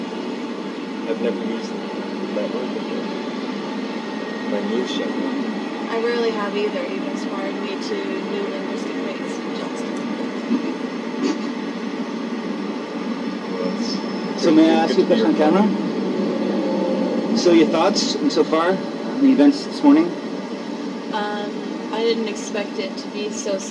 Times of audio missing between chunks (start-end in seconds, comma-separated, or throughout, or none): none